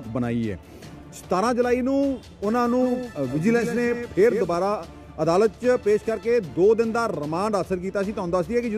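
A doubled audio track runs from 2.82 s to 4.54 s. A second, full-band copy of the sound trails the original by roughly 150 ms at about 10 dB lower, giving a distinct slapback echo with no decay or room colour. The copy starts and stops abruptly at those edges. The likely cause is the same signal reaching the mix twice, once through a slower capture path or an edit that left two copies out of step.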